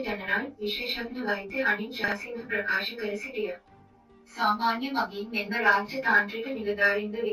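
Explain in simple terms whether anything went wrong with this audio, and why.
Something did go wrong, between 2.04 and 2.12 seconds. Two chunks out of order cause it. A 40-millisecond piece of sound arrived one chunk late and played after the piece meant to follow it. Nothing goes missing, but the sound briefly jumbles.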